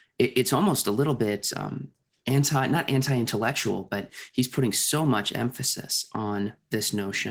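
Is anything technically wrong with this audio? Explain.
Yes. Opus voice compression is present throughout. The speech band up to 8 kHz is coded by linear prediction, with a transform layer above it, at a rate that fits about 16 kbps. That coarse coding leaves the speech plainly hoarse and slightly robotic.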